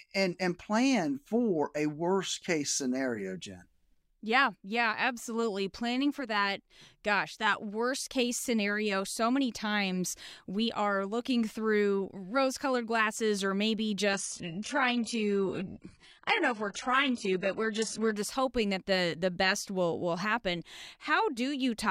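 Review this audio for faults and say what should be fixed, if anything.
From 14.13 to 18.13 s, after "colored glasses or maybe", an adaptive stream at a lower bitrate abruptly cuts everything above 11.1 kHz, with no gap, unlike a dropout. This fits a switch from 96 kbit/s AAC to 12 kbit/s HE-AAC. Quality returns by "just hoping that the". To prevent it, buffer more ahead or set a higher minimum rung in the bitrate ladder.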